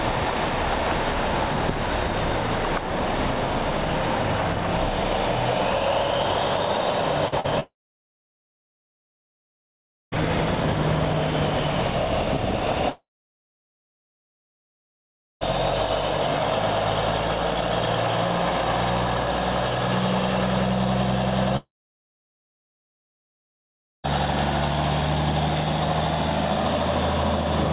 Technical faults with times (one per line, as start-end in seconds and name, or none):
7.28-7.47 short concealed packet loss
7.60-10.22 long network dropout
12.90-15.44 long network dropout
21.57-24.08 long network dropout